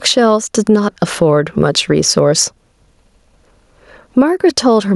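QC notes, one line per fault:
throughout, gain pumping: a level swing of around 15 dB. The likely cause is input gain set far too high with a fast limiter or compressor clamping each peak, squashing loud and soft parts together.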